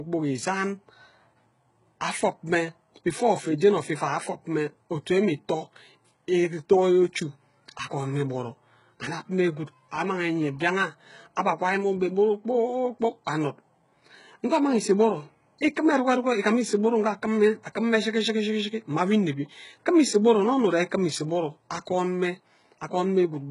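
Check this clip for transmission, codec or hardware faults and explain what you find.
One codec fault runs through the whole speech clip. Throughout, heavy HE-AAC compression is the likely cause: treble is rebuilt by copying lower bands upward, so sibilants sound gritty and lispy, with nothing above 11.1 kHz. This fits a very low bitrate near 12 kbps. Unlike a plain low-pass, the top stays bright but synthetic.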